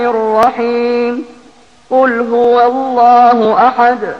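At 0.43, 1.44, 2.44 and 3.45 s there is a brief stutter or click from overlapping chunks. The audio was handled in 1.0 s blocks, and each new block began about 6.5 ms before the previous one finished. That short stretch plays twice at every join.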